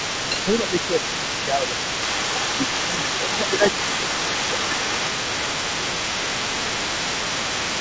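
The other side's voice leaking through runs from 0.00 to 7.81 s. A second voice sits under the talker the whole way, only a few decibels quieter. Its likely cause is the talker's device playing the far end on a loudspeaker, with the echo canceller failing to strip that playback out of the microphone signal. The leaked voice comes through with the same 8 kHz top as the rest of the audio, which fits a wideband call codec.

Speech suppressed in double talk occurs at 0.09 to 2.01 s, 2.54 to 3.46 s and 5.19 to 7.51 s. In these spans the talker's level sags by a few decibels in patches. The dips add up to well over a second in the first and last spans and only a brief stretch in the middle one. They likely happen because both sides are talking at once, so the echo canceller cannot tell its own talker from the loudspeaker echo and pulls everything down together.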